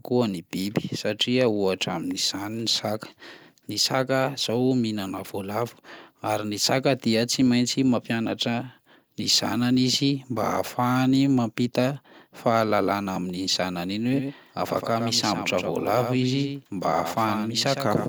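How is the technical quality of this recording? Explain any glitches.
The recording has one fault: a doubled audio track from 14.13 s to the end. The likely cause is a second, slower capture path or an edit holding two copies out of step. An undecayed full-band copy, about 10 dB quieter, abruptly joins the speech, trailing it by roughly a tenth of a second.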